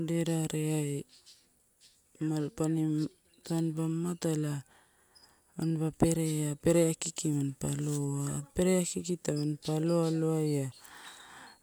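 Nothing goes wrong anywhere in this recording; there's simply no technical fault to point to.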